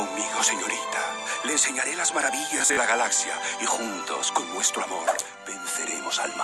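From 2.58 to 2.77 s the audio breaks into a rapid machine-gun stutter: a short slice repeats over and over, and the sound then picks up further along, as if it had kept playing underneath. This is Bluetooth stutter. Packets arrived late or not at all, so the receiver kept replaying its last buffer until fresh data came. About 112 ms of audio is missing, scattered across roughly 187 ms, with the longest gap about 37 ms, which points to several packets lost in quick succession.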